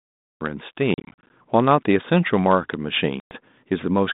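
The recording began late, a cut-off start: digital silence runs to 0.41 s, where the speech enters mid-sound with no natural attack. From 0.94 to 1.30 s, packet loss on the ADPCM call removes around twenty packets, 190 ms in hard-edged silent gaps up to 40 ms long. The decoder's predictor falls out of step, so the speech returns slightly distorted. A second loss of about ten packets, 110 ms, strikes the 32 kbit/s G.726 line from 3.20 to 3.34 s in the same way.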